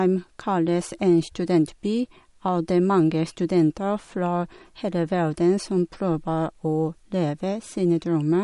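Throughout, the speech shows plainly audible MP3 compression, likely from a starved encoder. Nothing survives above 11.2 kHz, and weak detail below swirls wetly as lines drop in and out between frames, fitting a bitrate near 47 kbps. A plain low-pass filter would dull without swirling.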